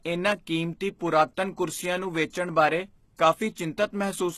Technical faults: HE-AAC compression; electrical switching spike

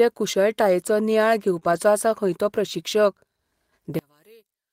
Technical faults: short concealed packet loss; lost packet rebuilt from error correction; one channel inverted

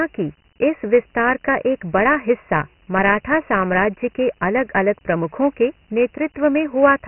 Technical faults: Dialogic VOX ADPCM

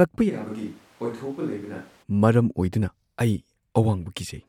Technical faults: switch to a distant microphone

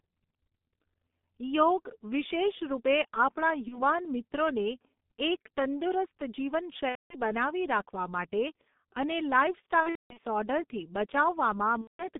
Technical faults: G.723.1 codec; VoIP packet loss concealed by the speech codec

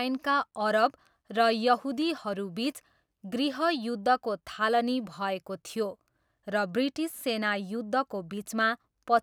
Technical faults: none

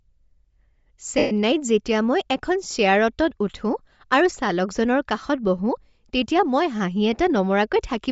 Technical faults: Bluetooth LC3 compression; lost LE Audio frames

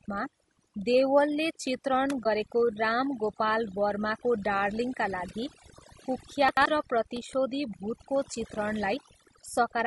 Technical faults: overdone noise removal; low-delay AAC compression; AAC frame loss with muting; chunks out of order

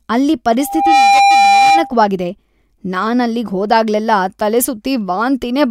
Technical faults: loudspeaker feedback squeal

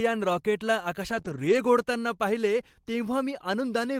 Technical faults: lost packet rebuilt from error correction; short concealed packet loss

